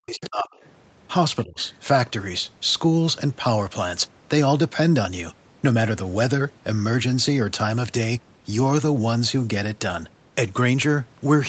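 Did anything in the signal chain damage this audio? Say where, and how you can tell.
Yes, and it's all in the call processing stage, specifically the echo canceller, in the first couple of seconds. The clearest problem is speech suppressed in double talk. From the start to 0.49 s the talker's speech drops out almost completely, a very deep cut. There's a shorter, shallower dip from 1.44 to 1.59 s. The likely cause is both ends talking at once: the canceller couldn't separate the near talker from the loudspeaker echo, so it ducked everything.

The same stage also lets the other side's voice leak through in three short scraps: 0.21 to 0.26 s, fairly noticeable at maybe 15 dB under the talker; 0.58 to 0.69 s, very faint; and 1.6 to 1.64 s, quiet but audible. That's likely residual echo: the far-end voice played on the talker's loudspeaker, picked up by the mic, and not fully cancelled. It lands right around the ducked stretches, which fits a canceller struggling with double talk.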